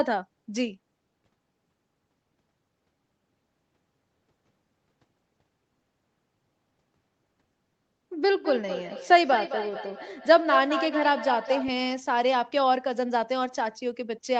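From 8.32 to 11.78 s there's feedback echo between two devices: the speech loops back roughly every fifth of a second, ringing and thinning, peaking about 7 dB below the talker.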